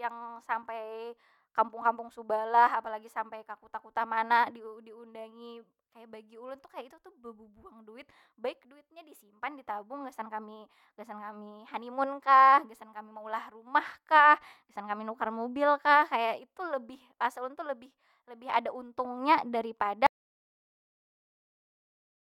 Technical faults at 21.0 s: audio dropout to silence

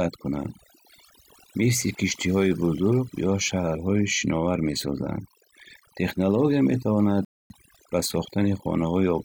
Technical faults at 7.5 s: overdone noise removal; rebuffering stall

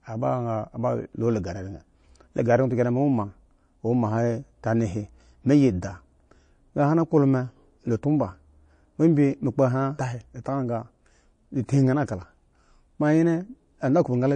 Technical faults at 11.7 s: MP3 compression; pre-echo

